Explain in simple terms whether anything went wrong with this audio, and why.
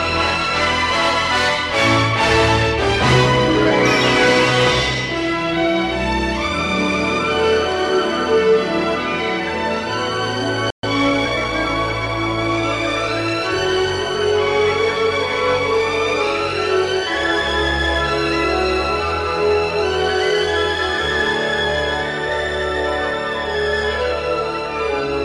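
A playback stall at 10.70 s cuts the sound off for about 0.13 s, until 10.83 s. The player most likely ran short of incoming data or was briefly held up, so it had nothing to send out and went silent until it recovered.

Time-compressed catch-up follows from 10.83 s to 12.09 s, where the sound runs about 1.1 times faster at normal pitch. The player is trimming and blending away tiny slices to make up the ground lost during the pause.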